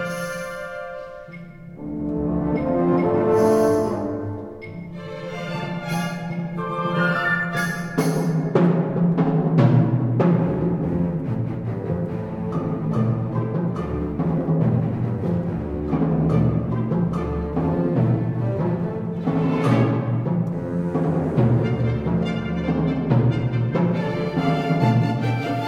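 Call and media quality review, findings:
No call or media quality faults found in this review.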